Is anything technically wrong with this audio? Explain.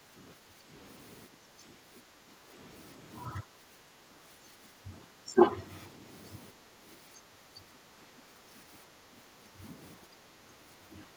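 Yes. The speech is suppressed in double talk at 0 to 0.19 s, 0.4 to 0.72 s, 1.38 to 2.51 s, 3.43 to 5.37 s, 6.52 to 9.62 s and 9.97 s to the end. The level dips by roughly 5 to 10 dB, with parts of the voice thinned or cut away. This is likely an echo canceller that cannot tell this talker from loudspeaker echo while the other side speaks, so it turns both down. Unlike packet-loss dropouts, these are partial, varying dips rather than clean gaps.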